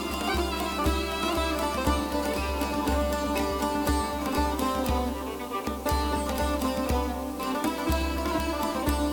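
A steady, even hiss sits under the music from start to finish, roughly 20 dB below it, with no crackle, grit or distortion riding on the tones. This is low bit depth with dither: the audio has been reduced to very few amplitude steps, which fits a 6-bit signal, and dither noise was added before rounding, so the quantisation error becomes constant white noise instead of distortion that follows the music.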